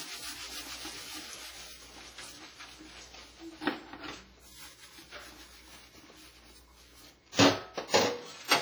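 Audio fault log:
throughout: WMA compression. The whole recording carries heavy transform-codec damage: a ringing, washy texture with a hiss that swells and fades along with the sound, and thin detail where weaker components have dropped out entirely. This fits a low bitrate around 24 kbps, likely from an early WMA encoder using long blocks. Unlike broadband noise, the hiss tracks the signal, and unlike MP3 artefacts it smears over longer spans rather than warbling.
7.88–7.94 s: pre-echo. Just before a sharp attack, a hiss rises out of near-silence and runs for about 56 ms, so the onset arrives softened and smeared instead of crisp. The transform block containing the attack spread noise sized for the loud transient back across the quiet stretch ahead of it. Unlike a reverb tail or an echo, this smear comes before the event, not after it, and it sounds like noise rather than a copy of the attack.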